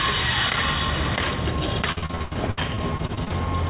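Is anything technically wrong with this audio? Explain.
Yes. From 1.92 to 3.32 s there is repeated packet loss, giving a robotic sound. Packets kept dropping, and each hole was patched by stretching the previous sound. About a third of that span is concealed, with gaps up to 91 ms, so it sounds choppy. The narrow call band, with nothing above 4 kHz, fits a G.711 path.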